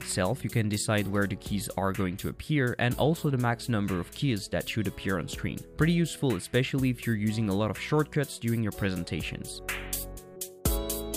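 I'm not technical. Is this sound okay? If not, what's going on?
Yes, this sound is okay; nothing in it points to a technical problem. No dropouts, clicks, or distortion can be heard anywhere in the clip.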